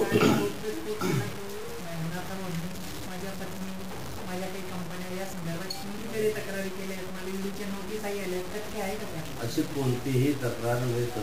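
From start to finish the sound carries a grainy, gritty distortion that tracks the signal itself, the classic mark of low bit depth without dither. It likely comes from truncating to about 5 bits, leaving error only about 10 dB under the signal, so quiet sounds turn gritty.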